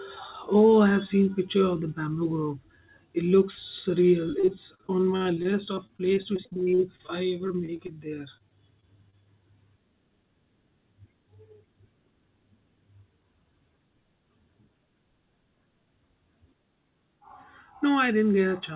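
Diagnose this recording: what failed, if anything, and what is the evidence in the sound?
The failure is at the network stage: repeated packet loss (robotic sound) on a G.711 call path whose audio stops at 4 kHz. From 4.4 to 7.90 s there is a rapid run of about thirty short holes, the longest 50 ms, with roughly a fifth of that span patched over. A shorter run follows from 8.37 to 9.27 s, with gaps up to 24 ms. Each hole is filled by stretching the preceding sound, which gives a robotic choppiness. A buffer underrun would instead leave silent clicks or hard dropouts.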